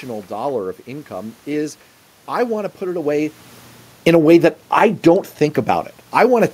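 Automatic gain falling begins at 3.92 s, right after "to put it away", and runs to 5.05 s. The gain control judged the input too loud and pulled its gain down by about 5 dB over roughly a second, so the speech and the room noise beneath it sink together. This comes shortly after the talker shifts position near 3.0 s, which changes the level at the microphone.

Automatic gain rising overlaps it from 4.27 to 5.29 s. The control reverses and lifts the gain by about 4 dB, so voice and background swell back up in step.

The same sequence repeats near the end. The gain falls again by about 5 dB from 5.69 to 6.33 s, then rises by about 4 dB from 6.24 to 6.49 s. This quick pumping makes the background noise breathe along with the level changes.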